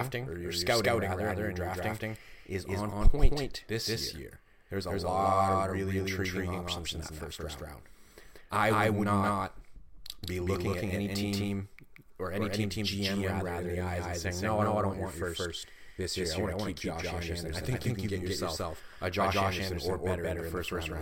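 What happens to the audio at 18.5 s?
At 18.5 s, like everywhere else in the clip, you're hearing a doubled audio track: a second, equally loud copy trailing by about a fifth of a second, likely from a slower second capture path.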